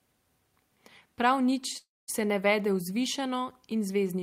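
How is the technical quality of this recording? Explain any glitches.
The recording has one glitch. From 1.77 to 2.10 s, a call audio freeze stretches the last sound into a fading buzz or hiss, then about 0.2 s of silence, before "se ne vede vzvišeno" resumes intact. This was likely caused by delayed packets draining the jitter buffer.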